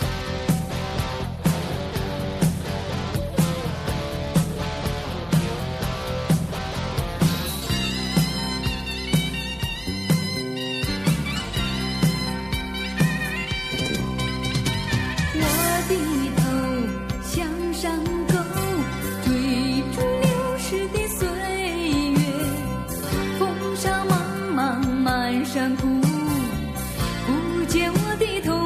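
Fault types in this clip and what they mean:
Compressed frames skipped: at 6.57 s the audio jumps ahead about 50 ms, fitting two lost 26.1 ms frames; overlap between frames smears the join into a brief blip.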